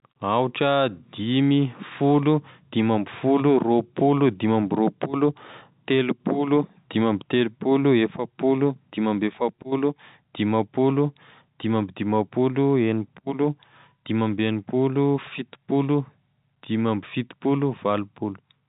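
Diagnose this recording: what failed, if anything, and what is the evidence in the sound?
Nothing failed: the speech carries standard G.711 mu-law telephone coding at 64 kbps, with nothing above 3.8 kHz and at most a faint level-following quantisation hiss, which is the format behaving as designed.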